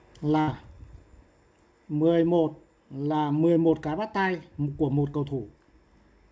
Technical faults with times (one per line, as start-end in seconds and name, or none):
0.41-0.50 burst of packet loss